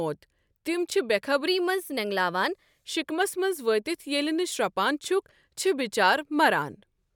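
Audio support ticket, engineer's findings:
Wrong sample rate, 1.48 to 2.86 s, just before "شِکمَس منٛز وٲتِتھ". Speech runs 1.09x fast, pitch up 1.47 semitones, with no conversion. Ratio fits 44.1 kHz material clocked out at 48 kHz. Probable component: playback path rate negotiation.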